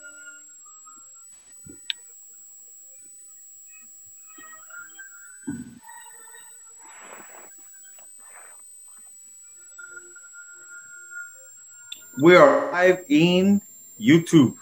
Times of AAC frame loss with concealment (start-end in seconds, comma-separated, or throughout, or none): 1.34-1.52, 5.55-5.88, 12.47-12.87